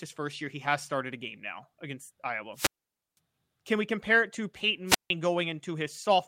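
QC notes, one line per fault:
2.54–3.18 s and 4.86–5.10 s, wireless microphone squelch dropout: the radio link weakens, hiss swells briefly, then the receiver's squelch mutes the output for about 505 ms and then 159 ms before the speech comes back.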